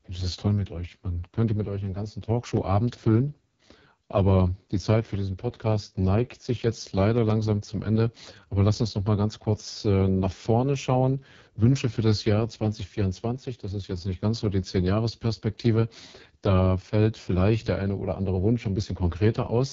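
From start to finish the speech carries the sound of the AMR wideband (HD Voice) codec, and it's being pushed hard. The voice comes out rough and raspy, which fits AMR-WB's lowest mode of 6.6 kbit/s, where the pulse-driven vocal tract model has too few bits to track the voice cleanly. Nothing reaches above about 7.4 kHz, and the top band is just shaped noise, so the detail up there sounds hissy rather than crisp.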